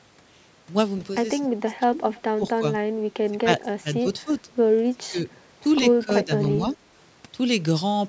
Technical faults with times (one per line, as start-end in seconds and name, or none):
1.40-1.98 speech suppressed in double talk
2.16-2.22 echo leak
2.37-2.64 speech suppressed in double talk
3.30-4.49 speech suppressed in double talk
4.90-5.18 speech suppressed in double talk
5.99-6.66 speech suppressed in double talk